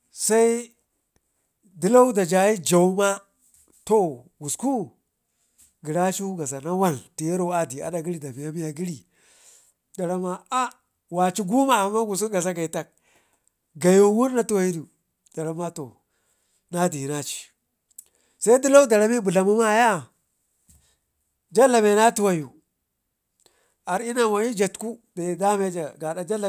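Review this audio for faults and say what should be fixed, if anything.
Nothing needs fixing: the speech signal holds steady throughout, with no dropouts, level problems or interruptions to be heard.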